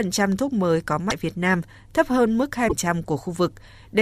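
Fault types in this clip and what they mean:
Broken MP3 bit reservoir: At 1.09 to 1.12 s and 2.68 to 2.73 s the speech jumps ahead and the first frames after the cut come out garbled. The likely cause is missing MP3 frames, so the next frame's borrowed data points into the wrong bytes. On a spectrogram each damaged stretch is about one to two 24 ms frames wide; the waveform shows a discontinuity.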